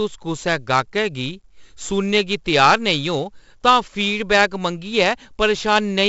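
Speech carrying 4-bit ADPCM compression throughout: level-tracking gritty hiss on loud passages, smeared attacks, and nothing above 7.7 kHz, which fits a 16 kHz sample rate at 64 kbps.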